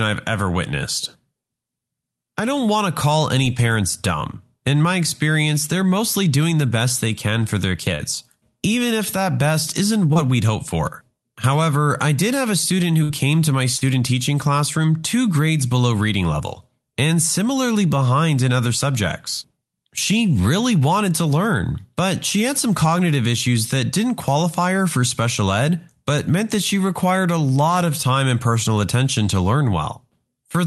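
At 7.95 s, just after "they can for their", a short concealed packet loss leaves about 40 ms filled in by the receiver. It extends the last sound and then blends back, which is heard as a brief smear. A 20 ms repeat at 10.13 s adds another brief smear.

From 13.03 to 13.11 s, after "did have a student", a burst of packet loss drops about 60 ms. That stretch is patched with a fading continuation of the preceding sound, and the audio resumes at "to my" with that piece gone.

At 13.77 s, between "to my" and "teaching classroom two grades", another short concealed packet loss fills about 35 ms and briefly wobbles the sound. Through all of this the Opus call path limits the top end to about 12 kHz.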